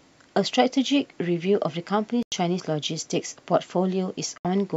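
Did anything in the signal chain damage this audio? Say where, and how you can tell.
Yes. At the converter, sample clock jitter of well under a microsecond mistimes every sample, leaving faint roughness about 50 dB down that grows with louder, brighter speech.

On the wireless link, the sound cuts to silence at 2.23–2.32 s and 4.38–4.45 s, about 93 and 70 ms gaps, likely Bluetooth dropout from packets arriving too late.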